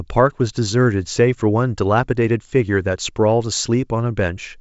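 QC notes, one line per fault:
No faults heard.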